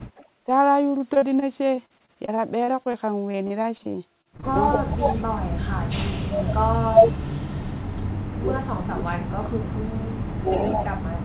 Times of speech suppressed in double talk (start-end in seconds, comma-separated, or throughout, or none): 4.74-5.46, 6.08-7.66, 8.29-9.85, 10.32-11.25